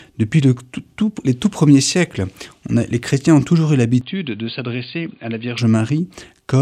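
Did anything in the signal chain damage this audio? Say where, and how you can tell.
Yes. From 4.01 to 5.58 s the audio abruptly loses everything above 4.7 kHz, drops by roughly 10 dB, and picks up a different, quiet noise floor, with no gap at either edge. This points to the driver stage, likely an input switched to a poorer device.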